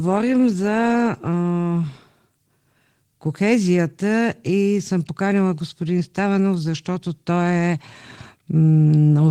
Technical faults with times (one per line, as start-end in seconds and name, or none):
none